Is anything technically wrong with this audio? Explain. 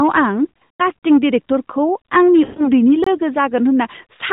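Yes. The audio has three problems: clipping throughout, two bursts of lost speech frames, and regular short gaps.

Hard clipping runs through the whole clip. Every loud syllable carries a harsh, crackly fuzz. The level was pushed about 11 dB beyond what a stage in the chain could pass, so the peaks were sliced flat. Only a small share of the waveform hits that ceiling, around one sample in twenty-five, but those flattened tops add bright harmonics high in the spectrum, which is where the edge comes from.

Lost AMR speech frames occur twice. Between 0.50 and 0.82 s the speech stutters and warbles unevenly. About 160 ms of audio is missing, scattered across a 280 ms stretch, with the longest unbroken loss 60 ms. At each failed frame the decoder filled the hole by repeating its last good pitch and vocal-tract settings at falling gain. Between 2.44 and 2.69 s a further 120 ms goes the same way, so the speech smears and dips before recovering. 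The narrowband phone codec itself, running at 12.2 kbps, adds only its usual band limit and slight coloration.

Gaps between chunks cut the sound at 1.00, 2.02, 3.04 and 4.07 s. Each is a 23 ms hole with abrupt edges, spaced almost exactly one second apart. The audio was handled in one-second chunks with a sliver of silence inserted at every join, which fits a block of padding or late playback start. Nothing is missing, but each seam is heard as a brief, sharp dropout.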